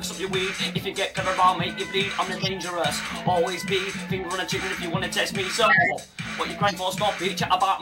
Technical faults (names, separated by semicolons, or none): corrupt frame decoded; compressed frames skipped